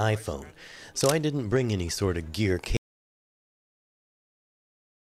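At 2.77 s the sound cuts out to silence through the end, an audio dropout to silence, likely from the input device losing its connection.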